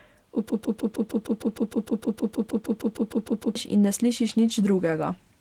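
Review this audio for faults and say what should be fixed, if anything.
A broken-record loop runs from 0.49 to 3.55 s. A 155 ms fragment repeats back to back twenty times, and the speech due in that span is lost. The stream likely stalled and kept replaying its last held buffer. Add stall detection that mutes or resyncs rather than repeating old audio.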